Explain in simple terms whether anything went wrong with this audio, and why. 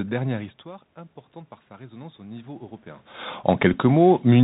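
Three things went wrong.

The whole clip passed through the Bluetooth CVSD headset codec. This narrow phone-style codec cuts away everything above 4 kHz, so the speech sounds dull and boxed in. It tracks the sound one tiny up-or-down step at a time. Sharp hissy sounds change faster than it can follow, so s sounds come out scratchy. A grainy hiss also sits under the voice the whole time.

From 1.67 to 3.14 seconds, just after "histoire importante par", you hear automatic gain rising. The voice arriving at the microphone got much quieter. The automatic gain control noticed and slowly turned the volume up over about a second and a half. It only made up part of the drop. The background swells along with the voice as the gain climbs. The talker also shifted around 3.0 seconds, which is natural movement and not a fault.

At 3.73 seconds there is a Bluetooth headset packet repeated. A brief bit of sound, about 7.5 ms, never made it from headset to phone. 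That fits two lost packets. Instead of silence, the chip played the previous packet again to fill the gap.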